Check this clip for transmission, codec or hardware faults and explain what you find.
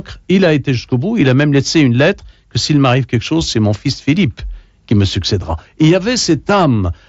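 Nothing to flag here: it's just speech coming over a Bluetooth mSBC headset link, with the bit of grain and the top end stopping around 8 kHz that come with that wideband codec.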